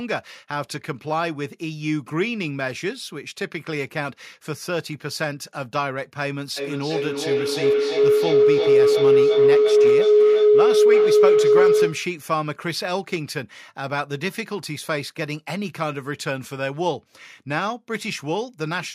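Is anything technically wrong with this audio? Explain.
Yes. From 6.57 to 12.16 s a low, sustained tone swells over the speech and peaks about 10 dB louder than it, sitting somewhere around 400 Hz and throbbing roughly three times a second. This is feedback howl: two devices in the same room on one call form a loop from microphone to loudspeaker and back that adds gain on every pass. Each trip narrows the sound toward the frequency the loop favours until the loop is broken.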